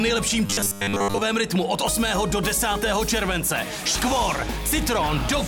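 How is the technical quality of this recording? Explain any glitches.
One glitch stands out. From 0.46 to 1.21 s there is robotic sound from repeated short buffers: a rigid, metallic 100 Hz buzz. It is likely caused by audio arriving too seldom, with the last 10 ms looped to fill most of the gap.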